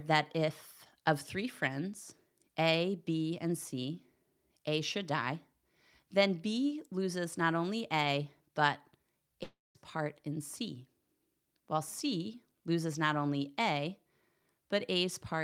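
9.43 to 9.77 s, likely a long network dropout: speech becomes a fading buzz, then silence; the spectrogram shows smeared bands, then an empty gap.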